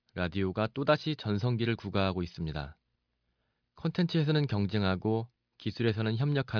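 No technical faults are audible.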